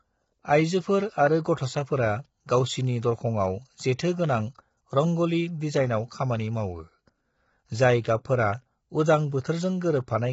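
Throughout the speech, the sound is rough and grainy, with noise filling the gaps between harmonics and nothing above 7.7 kHz. This is likely heavy low-delay AAC compression, AAC-ELD, whose short frames resolve pitch poorly at a rate that fits about 16 kbps.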